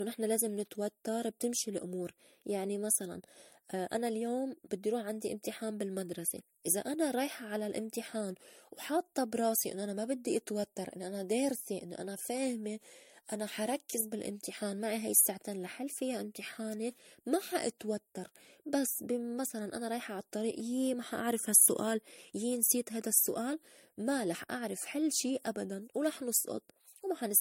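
Generation loss runs through the whole speech clip: it sounds swirly, smeared and hollow, with blurred consonant attacks and nothing above 16.6 kHz. The likely cause is about three passes through an MP3 codec near 65 kbit/s, each requantising on a shifted frame grid.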